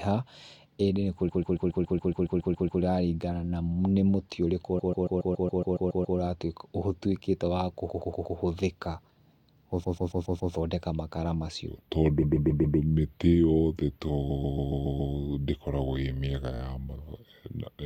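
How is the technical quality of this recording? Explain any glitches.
The speech is marred by two faults: a recurring stutter from repeated frames, and a final stretch that plays too slow and too low.

Repeated frames occur at 1.28–2.81 s, 4.78–6.17 s (after "mũtĩ ũrĩkũ"), 7.89–8.36 s (after "ũtuĩkĩte wa"), 9.83–10.53 s, 12.21–12.77 s, 14.29–15.13 s and 16.55–16.60 s. Blocks of compressed audio were delivered several times over, so the decoder replays the same slice, mostly 110 to 140 ms, but only 28 ms in the last one. Each event is heard as a rapid stutter.

A section at the wrong speed runs from 11.68 s to the end. It was likely played against the wrong clock, at 0.806 times normal speed, dragging the sound slower and about four semitones deeper.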